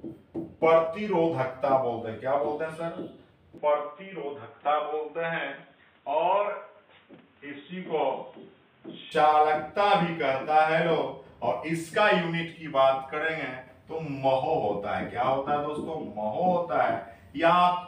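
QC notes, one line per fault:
3.58–9.12 s, input switched to a poorer device: the sound abruptly turns dull and boxy, with nothing above 3.8 kHz, and drops a few decibels in level, with a faint new background noise sitting well below it. The change is immediate, with no silence at either edge, and full brightness returns just as suddenly at 9.12 s. This is likely the recording input jumping to a narrower-band microphone or a headset call profile for that stretch.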